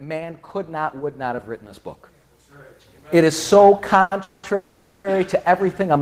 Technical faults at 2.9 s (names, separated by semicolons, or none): none